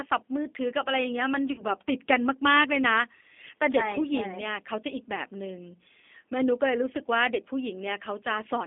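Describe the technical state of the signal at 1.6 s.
At 1.6 s the signal is inside a stretch of VoIP packet loss concealed by the speech codec. It runs from about 1.52 to 1.63 s. About 60 ms of audio went missing, which fits two lost packets. The decoder filled the gap by extending its last pitch and filter settings while lowering the gain frame by frame. The result is stretched sound, either a buzzy tone or a coloured noise, that fades instead of continuing the speech.

The G.729 codec also shapes this moment, as it does throughout the clip. It runs at 8 kbit/s and rebuilds speech from a vocal tract filter, a pitch predictor and a few pulses per frame. The line passes only about 250 Hz to 3.5 kHz, so the sound is band-limited. The codec damage is plainly audible as a rough, synthetic quality.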